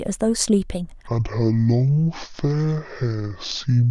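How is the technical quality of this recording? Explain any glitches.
The recording has one clear glitch in the speech. From 1.07 s to the end, a section plays at the wrong speed. It runs at 0.575 times its original rate. Speed and pitch drop together because the samples are stretched over more time. This most likely comes from an editor or player using the wrong clock for that stretch. The voice suddenly turns slow and heavy. Its pitch falls by about ten semitones.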